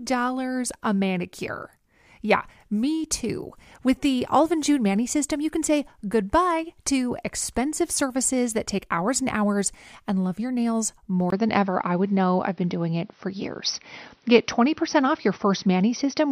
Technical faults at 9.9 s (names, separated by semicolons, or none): none